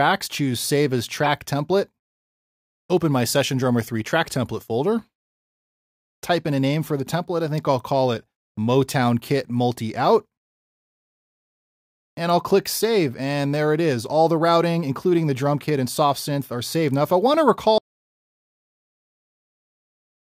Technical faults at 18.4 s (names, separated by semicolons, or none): audio dropout to silence